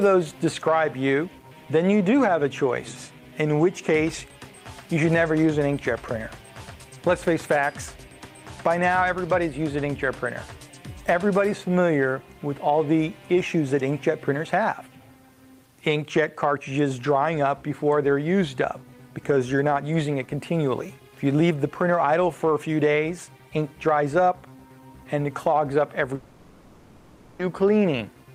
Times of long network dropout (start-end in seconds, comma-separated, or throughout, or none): 26.15-27.42